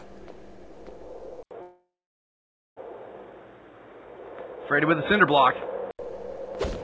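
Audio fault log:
1.43–5.99 s, input switched to a poorer device: At 1.43 s there's a short 80 ms dropout, then everything above 3.8 kHz vanishes, a faint new noise floor appears and the level shifts a bit. That's likely a switch to a narrower-band mic, since the G.722 path itself carries up to 8 kHz. It opens back up at 5.99 s.
1.62–2.78 s, call audio freeze: The last bit of sound gets stretched into a fading buzz, then about 0.87 s of silence, and the audio picks up exactly where it left off. Nothing's lost, but roughly 1.15 s of filler got inserted, likely because packets stalled and the jitter buffer ran dry.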